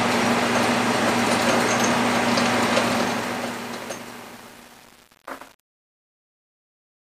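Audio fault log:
2.81 to 7.01 s, truncation distortion on a fade: as the fade-out that begins around 2.8 s sinks toward silence, the tail turns grainy instead of thinning away cleanly. The gain stage is rounding each sample to too few levels without dither, which fits about a 9-bit path, so the quietest waveform collapses into a few square steps. Unlike steady hiss, the grit follows the signal.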